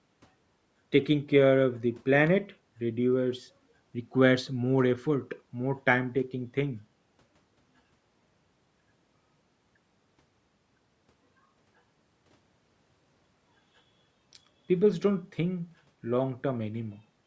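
Speech, with no technical faults to report.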